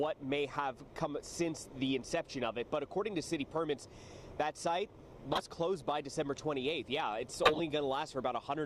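Corrupt frames get decoded at 5.32–5.42 s and 7.43–7.60 s: damaged data spread over a handful of frames makes short noisy chirps, the second louder, peaking near -10 dBFS.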